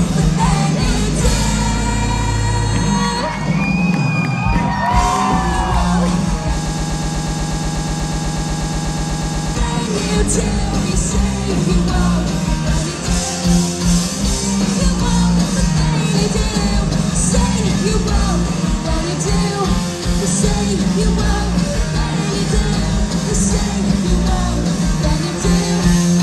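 From 6.66 to 9.55 s, a fragment of about 122 ms repeats back to back 24 times, a stuttering broken-record loop that replaces whatever should have played there. The likely cause is a stalled player, encoder or stream that kept resending its last buffered piece.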